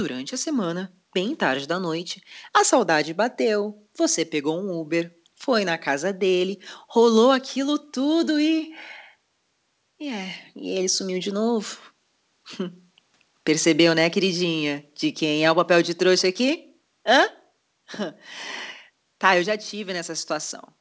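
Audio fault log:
Nothing stood out on listening to this speech recording.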